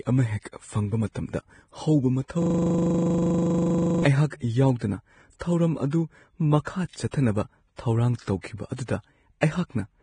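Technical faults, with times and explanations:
throughout, Vorbis compression: The audio sounds hissy and grainy, with roughened tones and smeared onsets, and nothing remains above 9.7 kHz. This heavy damage likely comes from Vorbis coding at a low rate, around 23 kbps, quantising the treble so coarsely that fine detail turns into noise.
2.42–4.04 s, system hang loop: A single 40 ms fragment repeats about forty times in a row, producing a rapid mechanical pulse at 25 Hz. The system froze while the sound hardware kept cycling the same short stretch of its buffer, replaying it exactly.
6.64–6.67 s, 7.11–7.13 s, 8.41–8.44 s and 9.41 s, pre-echo: Each sharp attack is preceded by a brief hiss, spreading 19 to 29 ms ahead of it, and the onset sounds softened. The codec spread quantisation noise sized for the loud attack across its whole block, including the quiet moment before it.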